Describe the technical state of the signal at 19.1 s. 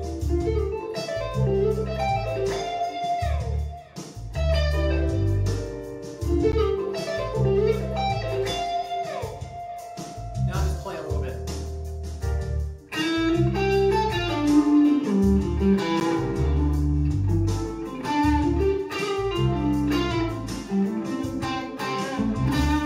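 At 19.1 s the signal is intact, with no audible fault at that point.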